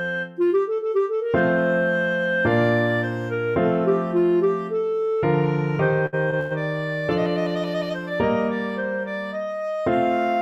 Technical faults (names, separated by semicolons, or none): repeated stalls (stutter)